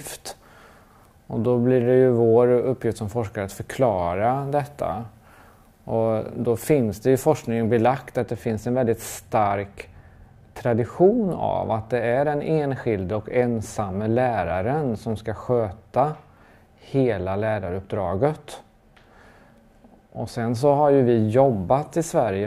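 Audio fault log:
8.20 to 22.46 s, de-emphasis applied wrongly: from 8.20 s to the end the sound turns dull and muffled, as if a blanket were laid over it. A treble-cut filter meant to undo pre-emphasis has been applied where none existed or applied twice, so the highs fall away along a smooth, gradual slope, down about 8 dB at 10 kHz relative to 1 kHz. Unlike a low-pass filter, there is no sharp cut-off point. The top end sags steadily rather than vanishing above one frequency.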